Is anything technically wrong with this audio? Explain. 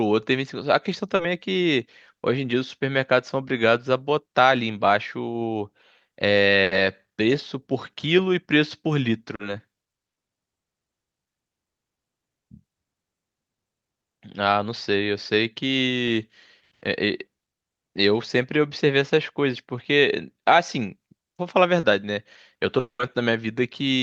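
Yes. This speech has gaps from network transmission, in three kinds.

Short concealed packet loss occurs at 1.15 to 1.22 s, 9.35 to 9.42 s and 21.79 to 21.86 s. Each time, about 40 ms of audio failed to reach the decoder in time. The receiver patched the hole by extending the preceding sound, repeating its pitch or substituting shaped noise, then crossfaded back into the real signal. Each patch is a quick smear or wobble.

A burst of packet loss runs from 6.63 to 6.74 s. Here a consecutive run of packets, about 80 ms of audio, was lost or arrived too late to play. Concealment stretched the last sound across the whole gap while turning it down, so a held buzz or a fading hiss replaces what should have been there. The speech then picks up later than it should, with that stretch simply skipped.

A long network dropout spans 22.79 to 23.02 s, with about 200 ms of audio never played. The receiver first carries the last sound forward as a fading buzz or hiss, then runs out of material to extend, leaving about 100 ms of silence before the speech resumes further along. 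The likely cause is a momentary stall in the network path, which suggests this is a different event from the short losses.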